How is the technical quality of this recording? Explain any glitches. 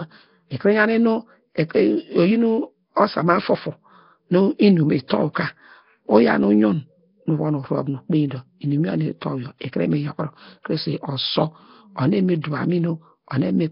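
Quality's pretty rough, with heavy codec damage all the way through. It's likely Nellymoser compression, the old Flash mic codec. It starves quiet bands of bits and backfills them with noise, so the speech gets a hissy halo and a smeared, underwater feel. Nothing survives above 5.3 kHz, which fits a low bitrate of around 22 kbps.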